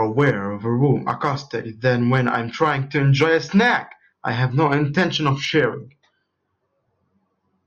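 From 5.45 s to the end of the clip, a de-emphasis filter has been applied wrongly: a treble cut intended to reverse pre-emphasis was applied to signal that either never had that boost or had already been corrected once. The result is a smooth downward tilt across the upper spectrum, with the level at 10 kHz sitting about 11 dB below 1 kHz. The speech in this final stretch turns dull and muffled, losing crispness and air.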